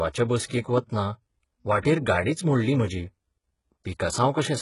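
Throughout the speech, the treble sounds synthetic. Nothing reaches above 11.1 kHz. The upper band reaches high, but it does not match the lower spectrum. The harmonics fail to line up across the join. S sounds come out gritty and lispy, with a metallic edge. The damage is heavy. This is likely HE-AAC compression, which codes only the lower spectrum and rebuilds the treble by copying bands upward. The sound points to a very low bitrate, around 12 kbps.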